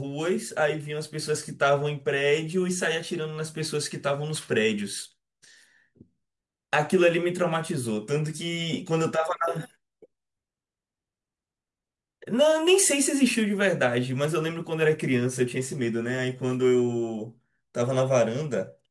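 No technical faults can be heard.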